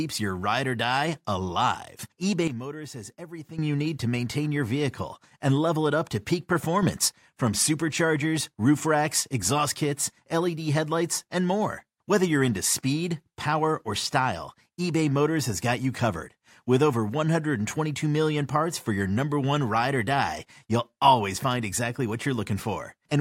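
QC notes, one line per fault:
2.48–3.58 s, sudden gain jump: after "ride or die alive" the level drops by about 13 dB, background included, then snaps back before "you need to maintain". Likely an unramped gain change.
6.83–7.08 s, sudden gain jump: after "it up to peak" sound and noise leap up about 6 dB together, returning abruptly before "from superchargers roof racks".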